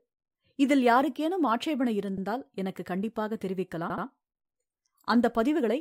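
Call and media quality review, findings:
Stutter at 2.17 s (78 ms block replayed once) and 3.90 to 4.05 s (replayed twice, adding 157 ms). Repeated frames: a decoder replaying a block that fits about three frames.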